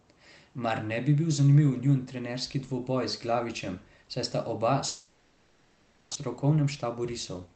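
From 4.87 s to 6.17 s, right after "saj sta oba", the speech stops and the last sound is drawn out into a buzzy, fading tail that fills the whole 1.3 s gap with no true silence. When speech returns, about a second of it is simply gone. This is likely a long network dropout: packets stopped arriving, the receiver kept extending the final sound to cover the hole, and the missing stretch was never recovered.

From 6.35 s to 7.55 s the speech plays back hurried, at roughly 111% speed, though the pitch stays the same. This is a jitter buffer speed-up. After the dropout the buffer was holding around a fifth of a second more audio than it aims for, so the receiver repeatedly cut out tiny pitch-period-sized slices, removing roughly 150 ms in total to bring the delay back down. Throughout, the audio sounds band-limited at about 8 kHz, consistent with Opus on a call path.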